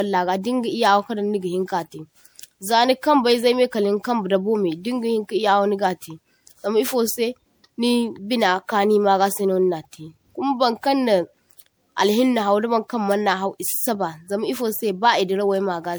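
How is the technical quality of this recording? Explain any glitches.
The recording is degraded throughout by generation loss. The speech was most likely run through an MP3 encoder around seven times, at what sounds like 128 kbit/s, each pass requantising on a shifted frame grid. The accumulated noise and spectral holes make the voice swirly, smeared and hollow, with blurred attacks, though content still reaches about 20.9 kHz.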